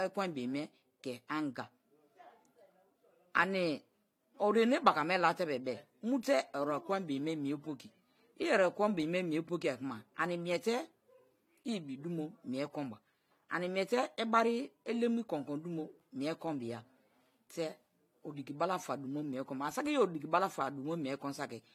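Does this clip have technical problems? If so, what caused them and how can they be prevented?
Yes. Throughout the speech, two kinds of coding artefact sit on top of each other: a smeared, swirly haze on consonants and a metallic, synthetic top end, with nothing above 20.4 kHz. This is likely transcoding between lossy codecs. The sound points to AAC-LC followed by HE-AAC, both around 48 kbit/s. The second encoder spends its bits reproducing the first one's artefacts and adds its own rebuilt high band on top. To prevent it, encode only once, from the original lossless source, straight to the final format.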